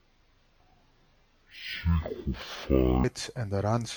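From 0.0 to 3.04 s, stereo read as mono: interleaved left-right samples play as one channel, so speech runs at half speed, an octave low, with a faint mirrored spectral image, unlike simple slowdown.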